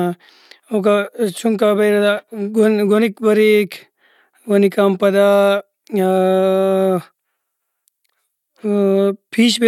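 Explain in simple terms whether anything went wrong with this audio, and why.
Nothing went wrong here: the speech signal stays steady and continuous the whole way, with no technical problems to be heard.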